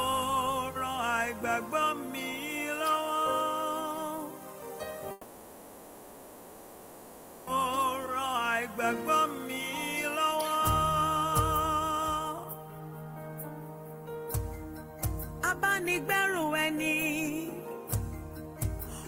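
At 5.11 s the audio gives way to a smeared continuation of the last sound, a buzzy hiss that fades and settles into a low steady noise floor until 7.49 s, when the audio resumes further along. This is a long network dropout, likely about 2.4 s of packets lost in transit and filled by the receiver. On a spectrogram the final spectrum stretches out, blurs and decays to a faint flat band. The waveform shrinks to a low ripple rather than true zero.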